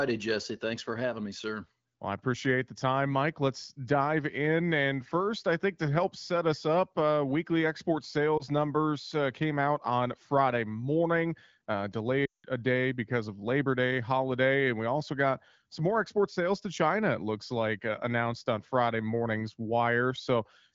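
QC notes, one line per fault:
8.37–8.43 s, lost AMR speech frames. A brief dip or warble. The wideband decoder covered one missing 20 ms frame by reusing the last good settings at reduced gain.
12.26–12.46 s, lost AMR speech frames. The sound drops to near silence within two frames. About 180 ms is lost, which fits a run of nine frames concealed with falling gain.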